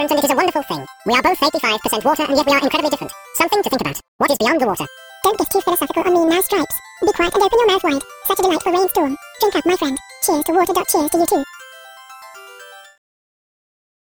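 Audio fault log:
throughout, wrong sample rate: audio runs at double speed and an octave high, which fits 22 kHz material played at 44.1 kHz without conversion.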